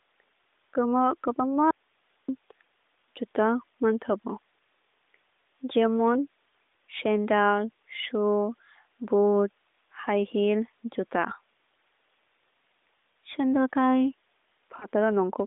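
At 1.71 s the speech cuts out abruptly and returns at 2.29 s, about 0.58 s later. This is an audio dropout to a faint residue. The gap holds only hiss, roughly 45 dB down. The likely cause is a signal break with the path left live.

Later come brief dips, at 13.12 to 13.15 s and at 14.80 to 14.86 s. These are lost AMR speech frames in the narrowband AMR stream. Each sounds like a brief dip or warble. The decoder stretches the last good sound at falling gain. Each fits a single lost 20 ms frame.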